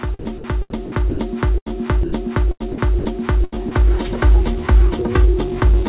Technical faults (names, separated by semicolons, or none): sound chopped by the voice detector; burst of packet loss; sound dropped by the voice detector